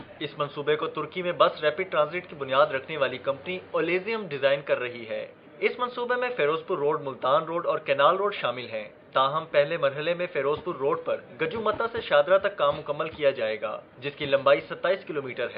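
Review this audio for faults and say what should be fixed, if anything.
Nothing to fix; no faults detected on review.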